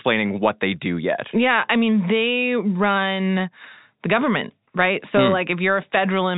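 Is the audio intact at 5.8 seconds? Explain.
Yes, the audio is intact at 5.8 seconds, with no dropout, click or distortion there; the band simply stops near 3.8 kHz, as expected of G.711 telephone coding.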